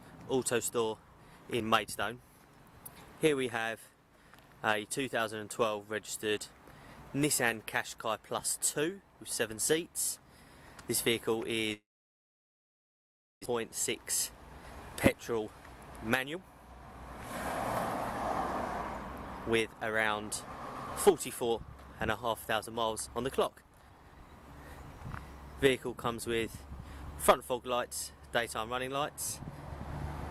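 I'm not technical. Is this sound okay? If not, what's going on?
No. From 11.73 to 13.47 s there was likely a long network dropout: the connection stopped delivering sound, which fades into silence, and about a second is lost.

Then the system hurried to catch up on the delay, a jitter buffer speed-up. The sound plays faster at the same pitch at 15.30–15.46, 16.10–16.37, 19.51–20.23, 21.09–21.53 and 22.26–23.99 s.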